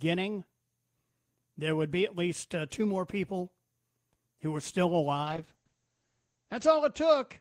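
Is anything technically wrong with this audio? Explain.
Yes, there is a call bitrate drop. From 5.26 s, just after "who were still", the call's bandwidth estimate fell and the encoder went from 32 to 9 kbps, with bandwidth cut from 20 kHz to 8 kHz. Speech turns coarser and duller, and it never recovers before the end.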